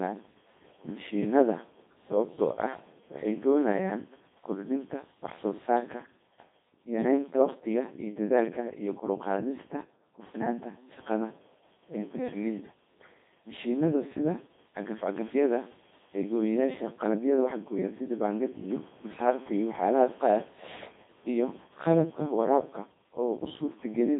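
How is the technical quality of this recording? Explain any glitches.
The quality is poor throughout. From start to finish the speech sounds robotic and buzzy, heavily degraded, confined to roughly 200 Hz to 3.6 kHz with nothing above 3.7 kHz. This is the Codec 2 vocoder: only pitch, voicing, energy and spectral shape survive, and the decoder rebuilds the voice from sine waves. The damage fits a rate around 2.4 kbit/s.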